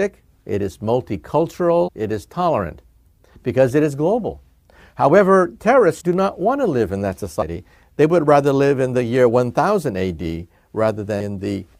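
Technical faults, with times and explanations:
1.87, 6.00, 7.41 and 11.2 s: compressed frames skipped. At each point the sound jumps forward, by roughly a tenth of a second, then about 70 ms, then around 150 ms twice. That fits whole 26.1 ms frames being dropped, and the overlapping frames smear each join into a soft blip, not a click.
6.13 s: underrun with held sample. The output ran dry for about 0.41 ms and the converter held its last value, so the waveform flatlines briefly. That tiny sliver of audio was lost.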